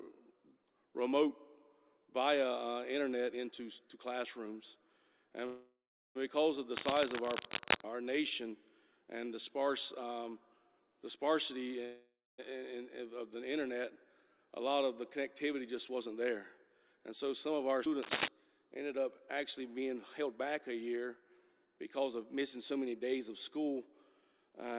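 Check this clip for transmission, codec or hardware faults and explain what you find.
The clip has transmission and hardware faults: two call audio freezes, two bursts of cable scratch noise, three jitter buffer speed-ups and one skip ahead. The audio stops near 4 kHz, which fits a G.711 mu-law call path.

Call audio freezes occur from 5.46 to 6.17 s and from 11.85 to 12.40 s. Each starts as a fading buzz or hiss that continues the last sound, then drops to silence for about 0.38 s and 0.24 s. The likely cause is delayed packets draining the jitter buffer. The audio resumes where it stopped, so nothing is lost, but the gaps add 0.69 s and 0.53 s of delay.

Cable scratch noise appears from 6.77 to 7.84 s and from 18.02 to 18.28 s. It is dense, uneven rustling, roughly as loud as the sound itself. A worn cable or connector being moved is the likely source. Its contact resistance jumps rapidly.

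Jitter buffer speed-ups run from 15.54 to 16.94 s at 109%, from 18.75 to 20.27 s at 108%, and from 21.20 to 23.57 s at 107%. The buffer held too much audio. Short pitch-period pieces were cut repeatedly, around 150 ms in each speed-up. The audio hurries, but the pitch stays the same.

A skip ahead happens at 17.85 to 17.88 s. Roughly 300 ms of audio is dropped. Playback jumps forward almost seamlessly, with only a 12 ms join. This points to a dropped stretch while later audio was already waiting, which cut the delay by about 0.3 s.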